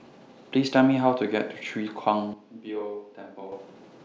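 From 2.34 s to 3.52 s the speech abruptly turns roomy and hollow, thinner in the bass and about 10 dB quieter, with faint room noise underneath. This is likely a switch to a distant microphone. Unlike added reverb, it jumps in and out instantly.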